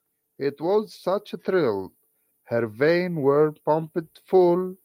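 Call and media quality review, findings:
Automatic gain rising, 0.37–4.72 s: voice and background swell together by about 7 dB. AGC judged input too quiet, ramped gain up gradually across the span.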